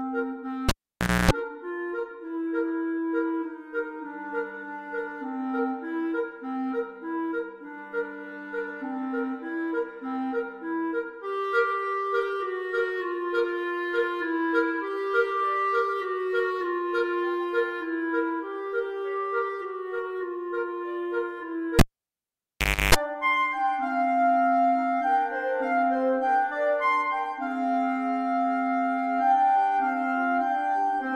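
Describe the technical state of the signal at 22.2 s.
At 22.2 s the signal is in the middle of a cable pulled and plugged in, running from 21.79 to 22.95 s. A pop marks the live lead coming out, and the signal falls to near silence for about 1.1 s. As the plug goes back in, its tip briefly touches before the ground contact seats, letting in a 0.31 s burst of 50 Hz mains buzz. A second pop follows as the audio returns. Those bracketing pops and the hum distinguish it from a clean digital dropout, which would simply go silent.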